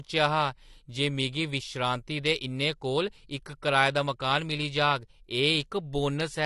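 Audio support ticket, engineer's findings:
AAC compression, throughout. Speech is dull and smeared, with warbly fizz on sibilants and held vowels, and nothing above 11.9 kHz. Likely an AAC-LC encode upstream, fitting roughly 32 kbps, where coarse quantisation of frequency lines leaves spectral holes and pulls the cut-off down. Worth checking encoder bitrate settings.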